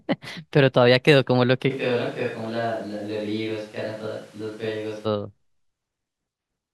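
From 1.72 s to 5.04 s the speech turns suddenly roomy and hollow, thinner in the bass and about 5 dB quieter, with room noise only around 25 dB below it. The likely cause is a switch to a distant microphone, with the close one cutting back in abruptly.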